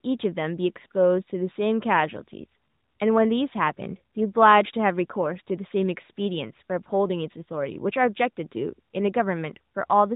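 No faults are audible in this speech; the AMR narrowband mobile codec path at 12.2 kbps behaves as designed, with nothing passing above 3.8 kHz and only the light coding texture that rate leaves.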